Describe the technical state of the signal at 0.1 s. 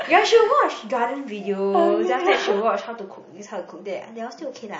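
At 0.1 s the speech signal is intact, with no audible fault at that moment.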